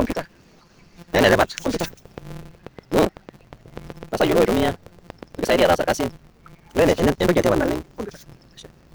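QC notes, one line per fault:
Throughout: block size mismatch (truncated). A steady buzz near 172 Hz sits under the speech. It comes from a jump at every block boundary. One stage writes longer blocks than the next one reads, so the tail of each block is lost. The read side fits a 256-sample block. The speech runs about 1.88 times too fast, yet its pitch stays roughly normal. Whole chunks are dropped rather than resampled.
1.81 to 5.48 s: train of clicks. Sharp pops repeat at a regular 4.37 per second, around thirty in all. Each has much the same shape. They peak at roughly 5 dB above the speech level. They continue through the pauses, which shows they are laid over the signal rather than part of it. Their steady pace likely points to interference from nearby equipment.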